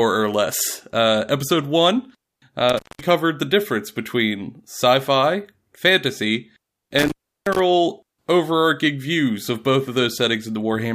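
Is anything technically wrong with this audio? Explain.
Yes. The speech drops out twice from an intermittent contact. After "episode one" (2.69 to 3.06 s) the sound crackles, goes silent for about 200 ms apart from faint hiss, then crackles back before "the difference between sci". After "between sci fi fantasy" (6.99 to 7.59 s) the same crackle-gap-crackle returns with a longer open stretch of about 350 ms. A loose cable or plug briefly breaks the signal path, and the crackles mark the contact opening and closing.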